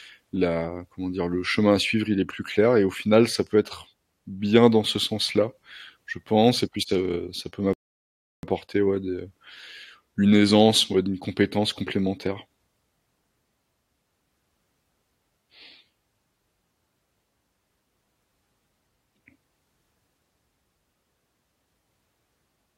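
At 7.73 s, right after "ça heu ça peut", the speech halts in a rebuffering stall: playback ran dry and waited about 0.7 s for more data, resuming cleanly at "ouais des heu" at 8.43 s. The waveform shows a flat gap, the spectrogram a blank vertical band.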